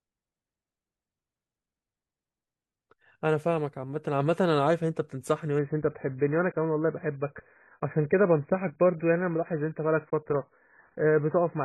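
At 5.59 s the adaptive stream switches down to a lower bitrate and stays there to the end of the clip, because the connection could no longer sustain the higher rendition. The speech loses its treble abruptly, with nothing above about 2.5 kHz, and coding artefacts rise in a sudden step with no gap. The dull, band-limited result suggests roughly a drop from around 96 to around 12 kbit/s.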